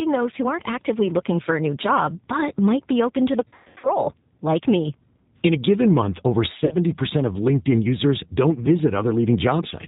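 The whole speech clip has the sound of the G.729 codec. The band stops at 4 kHz. Voices come out slightly rough and synthetic, which fits 8 kbit/s G.729A. The damage is plainly audible.

At 3.48 s, after "be open to the", VoIP packet loss concealed by the speech codec begins. About 300 ms goes missing, scattered over 360 ms, with runs up to 120 ms. The decoder stretches its last sound into a fading buzzy tone or coloured noise. The losses end by "like me" at 3.89 s, though the voice stays weak or distorted a little after. A shorter dropout follows "a given month over", from 6.65 to 6.76 s. It costs 60 ms, stretching and fading the last sound in the same way.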